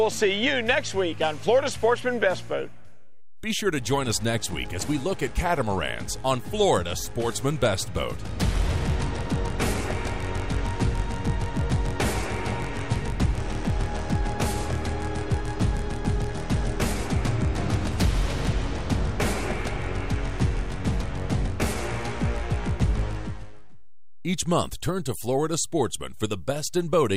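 A DC offset runs through the whole recording, from start to end. The waveform sits shifted away from zero by a steady amount, about -35 dBFS. It adds nothing you can hear as a tone or noise. Instead, it shows as constant energy at the very bottom of the spectrum, at zero hertz. It also eats into headroom, so peaks on one side have less room than they should.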